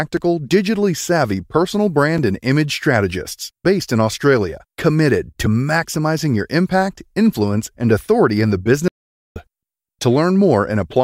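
Starting at about 0.17 s and running to around 6.19 s, the speech picks up a string of periodic USB or driver dropouts, spaced every 2.0 s, about four in all. Each time, something is blocking the bus or the audio driver on a fixed schedule, and a few milliseconds of audio get lost and replaced with silence. You hear them as small, evenly timed ticks riding on the speech, a steady little pulse.

Later, at 8.88 s, the sound just stops dead and stays silent until 9.36 s, a gap of roughly 0.48 s. That's a playback stall: the output went quiet partway through and then carried on. The likely cause is the player running dry on data or its thread getting held up for a moment before it recovered. It's long enough to register clearly as a hitch in the flow rather than a click.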